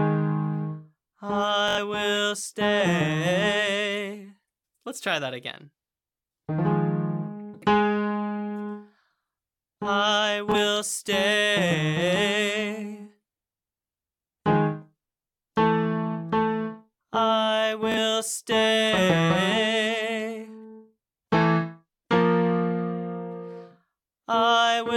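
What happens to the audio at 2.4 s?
Nothing goes wrong at 2.4 s: the audio plays through that moment intact, with no dropout, click, glitch or other fault to be heard.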